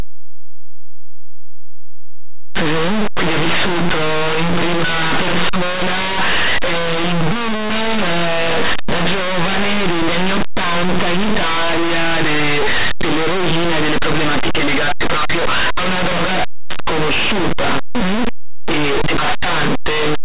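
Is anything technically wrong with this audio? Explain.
Yes. Throughout the speech, linear audio is being read as companded: samples stored as plain linear 8-bit values are decoded as mu-law codes. Mu-law decoding maps codes just on one side of zero to its largest outputs, so quiet passages near silence erupt into very loud, harsh distortion. Plain 8-bit storage, read correctly, would only add a faint grainy hiss about 50 dB down. This harshness is loud and tracks the signal's sign.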